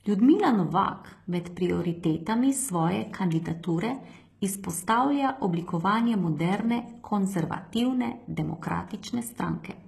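Likely HE-AAC compression throughout the speech: the treble is rebuilt from copied lower bands, so s sounds turn gritty and lispy, with nothing above 12.3 kHz, consistent with about 16 kbps.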